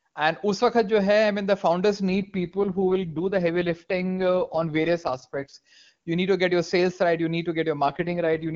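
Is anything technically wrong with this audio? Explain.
Yes. Two AMR rate drops occur: 2.10 to 5.54 s, after "I mean the founders", and from 7.86 s to the end, after "need to". The bandwidth holds with no gap, but the wideband speech turns rough and raspy, which fits the link forcing AMR-WB down from its top rate to around 6.6 kbit/s.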